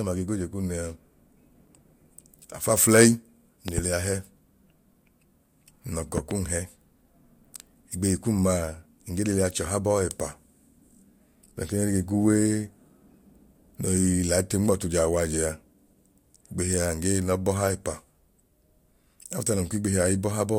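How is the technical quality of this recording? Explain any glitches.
The recording has two glitches, both loud pops: a quick double pop at 3.68–3.81 s and another at 6.18–6.34 s, each peaking roughly 10 dB above the speech. They're likely voltage spikes from a plug, switch or static, with the speech carrying on underneath.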